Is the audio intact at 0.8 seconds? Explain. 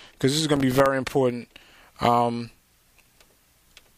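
No. Processor overload crackle runs from 0.47 to 0.86 s: missed buffers of about a millisecond and a half drop out as silent gaps, producing a gritty crackling burst.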